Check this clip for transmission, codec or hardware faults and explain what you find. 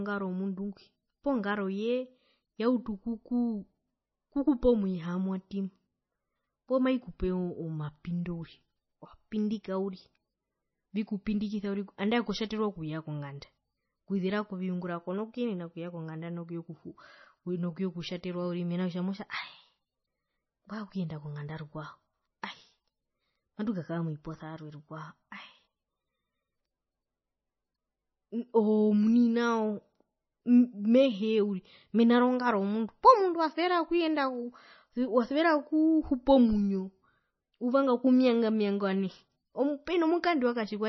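The whole clip carries heavy lossy-codec damage, most likely MP3 compression at a starved bitrate. Throughout, the encoder has had too few bits to spend, so it cut the treble hard at about 5.9 kHz and discarded the quieter frequency lines, which then pop in and out from frame to frame. The speech sounds dull and muffled, with a watery, swirling texture and chirpy, metallic sibilants. Damage this heavy points to a bitrate of roughly 22 kbps.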